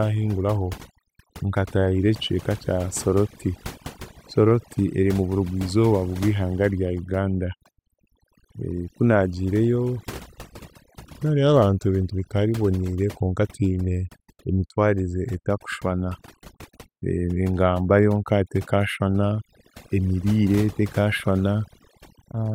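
Throughout the speech, overdone noise removal is at work: the noise reduction was pushed too hard, switching off individual frequency bands that sit close to its noise estimate. The quieter parts of the voice vanish with them, leaving near-silent gaps sprinkled with twinkling specks.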